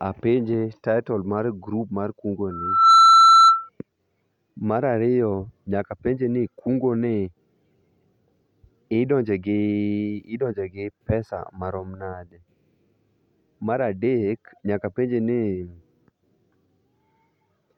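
From 2.51 s to 3.69 s a loudspeaker feedback squeal rises over the speech: a single tone at 1.3 kHz that swells in under half a second and then holds at roughly 15 dB above the talker. A microphone is picking up the loudspeaker it feeds, and at 1.3 kHz the loop gain exceeds unity, so that frequency reinforces itself on every pass until the loop is broken at 3.69 s.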